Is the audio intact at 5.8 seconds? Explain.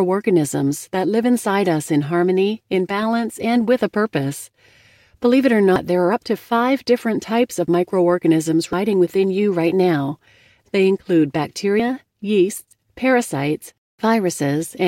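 No. At 5.76 s the speech jumps abruptly forward, with about a fifth of a second of sound simply missing. This is likely a dropped buffer (overrun): the recording software fell behind, the hardware overwrote samples it hadn't collected, and the two sides were spliced together. Unlike an underrun, which inserts a gap of silence or a repeat, nothing fills the hole here.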